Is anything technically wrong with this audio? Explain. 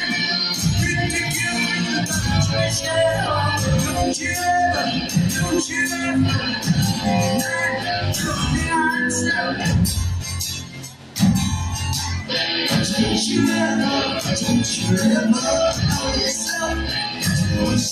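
No, nothing technically wrong can be heard in this audio. There are no faults to point to at any moment.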